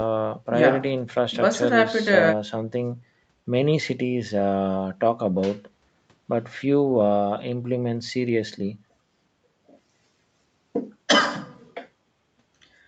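Nothing in this speech stands out as a technical fault; it simply carries the sound of a call microphone's processing, with the lowest bass trimmed away and nothing above 8 kHz, which is just how that path works.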